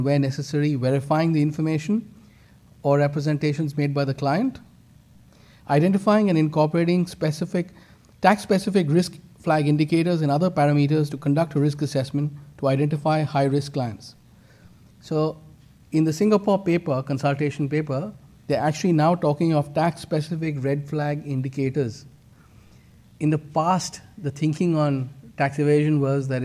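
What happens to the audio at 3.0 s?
Nothing goes wrong at 3.0 s; the audio plays through that moment intact, with no dropout, click or distortion.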